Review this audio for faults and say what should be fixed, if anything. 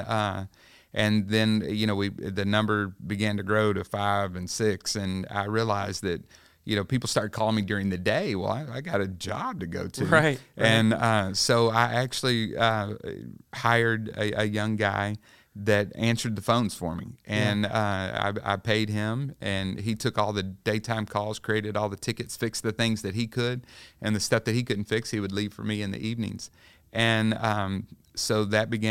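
Nothing needs fixing, as no technical faults can be heard anywhere in the signal.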